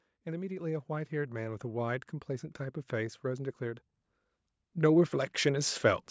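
From 0.11 to 2.14 s you can hear automatic gain rising: the AGC decided the speech was too quiet and ramped up by about 8 dB, so voice and background swell together. It does it again from 4.74 to 6.06 s, about 5 dB.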